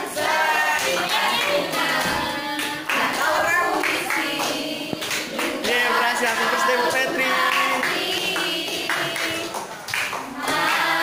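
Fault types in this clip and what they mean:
Sample clock jitter: the converter's clock wavers by around 10 microseconds, so each sample lands slightly early or late and picks up an error proportional to the waveform's slope. It adds a hiss-like roughness about 20 dB below the signal, strongest on loud, bright passages.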